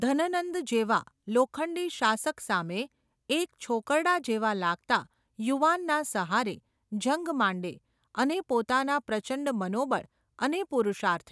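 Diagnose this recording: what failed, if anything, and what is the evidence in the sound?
Nothing in the speech stood out as a fault on listening, so there is no failed stage to point to.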